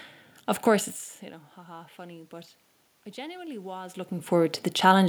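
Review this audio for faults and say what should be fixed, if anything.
Automatic gain rising runs from 1.55 s to 5.03 s, starting just after "course it's you know". The input level falls by about 19 dB, partly as the talker moves away from the microphone around 1 s, and the gain control responds by slowly raising its gain by about 6 dB over some three and a half seconds. Because it amplifies everything, the room noise swells along with the speech, and the level keeps drifting as the talker moves again near 4 s. To prevent it, set a fixed gain, or give the automatic gain control a faster, limited response and a noise gate so it does not lift the background.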